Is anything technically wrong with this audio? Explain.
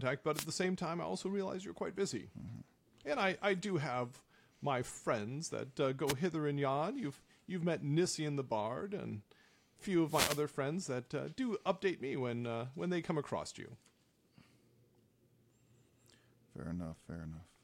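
Yes. The speech is hit three times by short bursts of static, a wireless microphone noise hit: at 0.34 to 0.45 s, just before "the same time I"; at 6.07 to 6.13 s, between "my friends that uh" and "hither and yon"; and at 10.05 to 10.45 s, between "and a few" and "friends that uh do". Each is a brief swish of hiss. Reflected radio paths cancel the analogue FM carrier, so receiver noise surges until the signal recovers.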